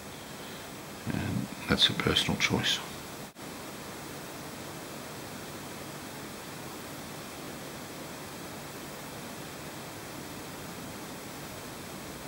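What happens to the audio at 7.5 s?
A single Bluetooth packet went missing, it seems, so from 7.45 to 7.48 s the receiver filled the gap by replaying its last buffer, about 20 ms. You hear one brief stutter, a tiny repeated slice, and then the audio picks up further along, as though it had kept playing.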